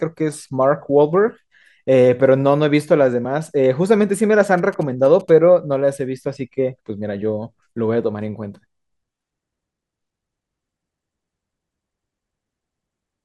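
From about 4.58 to 5.30 s there's a burst of GSM signalling interference: a nearby 2G phone talking briefly to the network, say before a call or text lands, and the audio circuitry rectifying that RF into sound. You hear that galloping dit-dit-dit run of short buzzes at roughly 217 Hz, tucked well under the speech at something like 25 dB down.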